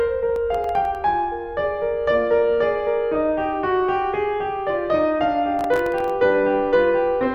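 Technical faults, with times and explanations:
0.36 to 0.95 s, processor overload crackle: the music gets a gritty tearing as the processor falls behind and misses a handful of its very short buffer deadlines, each under a millisecond. Each miss drops in a tiny slice of silence with hard edges, and those clicks run together into crackle.
5.59 to 6.10 s, processor overload crackle again: same mechanism, but many more missed buffers, so the crackle is denser until the load eases.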